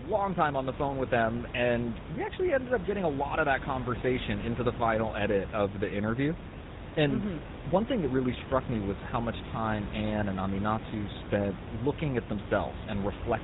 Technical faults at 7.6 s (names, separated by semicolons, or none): GSM full-rate codec